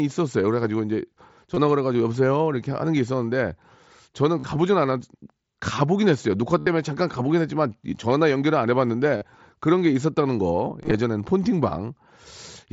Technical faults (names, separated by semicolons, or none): concealed Bluetooth headset packet loss